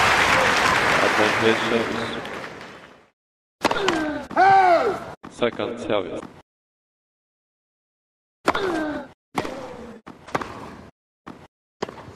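The audio jumps forward between 4.86 and 4.88 s. This is compressed frames being skipped. Roughly one frame is missing, about 20 ms of audio, which fits a frame length near 23 ms.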